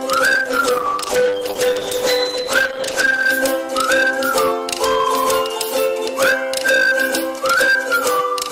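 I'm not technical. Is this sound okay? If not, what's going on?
No, it has two problems. Hard clipping runs through the whole clip: the level is pushed far too high, so the loudest parts get chopped flat and come out crackly and fuzzy. From 0.37 to 3.35 s there's a call bitrate drop, where the connection briefly squeezed the sound into far less data, so it turns muffled and watery before recovering.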